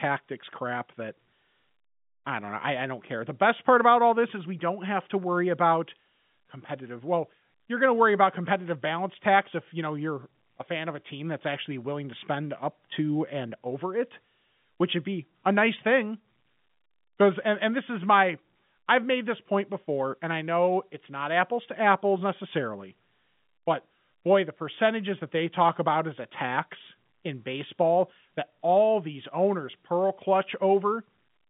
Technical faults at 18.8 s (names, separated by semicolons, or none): none